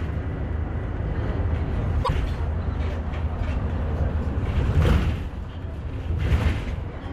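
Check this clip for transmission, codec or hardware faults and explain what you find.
There's one fault: damaged data in the compressed stream, from 2.0 to 2.09 s. Corrupted bytes there left the decoder misreading frames and losing sync while it hunted for the next valid header, so you get a brief chirp, squawk, click or short hole.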